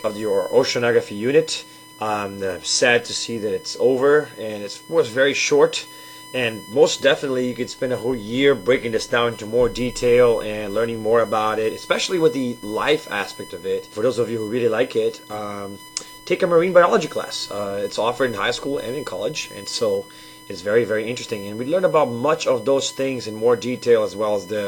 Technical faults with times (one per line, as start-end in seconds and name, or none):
0.00-24.67 USB whine